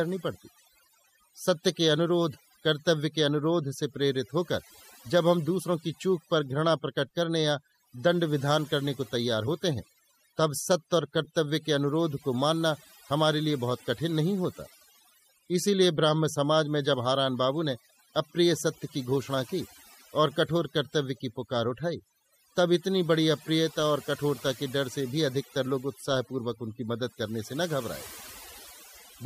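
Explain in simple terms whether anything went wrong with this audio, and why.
Something did go wrong: overdone noise removal, running through the whole recording. The background noise was cleaned out too hard, so it dropped and broke up into twinkling, warbling specks, and softer parts of the voice were stripped away too. A simple noise gate would instead cut the sound in and out between phrases.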